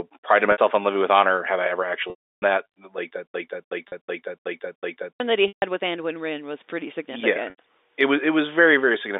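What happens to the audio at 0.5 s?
Packets were lost from 0.52 to 0.58 s, a 60 ms gap that fits three 20 ms packets. This is packet loss with pitch repetition: the receiver loops the last pitch period and fades it out, so the sound holds briefly on a buzzy tone that decays before resuming.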